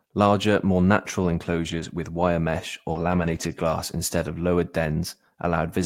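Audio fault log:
1.63–1.85 s, lost packet rebuilt from error correction: about 120 ms was played from low-bitrate copies carried in later packets, so there is no gap, but the sound turns rougher and noisier.
2.91–2.97 s, short concealed packet loss: about 40 ms never arrived. The decoder extended the preceding sound and blended back, giving a brief smear or wobble.
2.95–3.53 s, lost packet rebuilt from error correction: about 300 ms was rebuilt from redundant low-bitrate copies, overlapping the concealed gap. This longer coarse, noisy stretch points to many separate lost packets.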